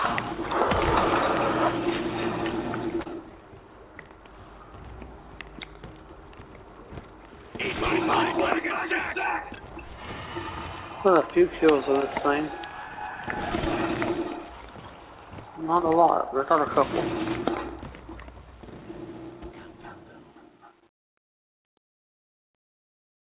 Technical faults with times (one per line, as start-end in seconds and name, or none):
3.01-3.07 short concealed packet loss
18.03-23.31 truncation distortion on a fade